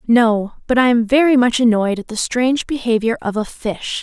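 A short speech recording, with nothing technically wrong with it at any point.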